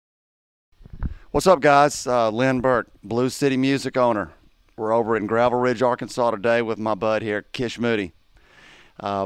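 Nothing in the audio stood out as a technical fault on listening.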